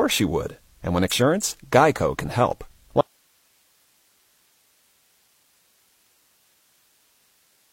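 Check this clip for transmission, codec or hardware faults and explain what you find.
Two faults are present in this speech clip: damaged data in a compressed stream, and an audio dropout to a faint residue.

Damaged data in a compressed stream, at 1.07–1.13 s, 3.81–3.85 s, 5.95 s and 7.57–7.62 s: corrupted frames make the decoder lose sync and resynchronise, producing short chirps or blips.

Audio dropout to a faint residue, from 3.01 s to the end: the speech cuts out abruptly, leaving only hiss about 45 dB below signal, likely from signal loss with the downstream path still live.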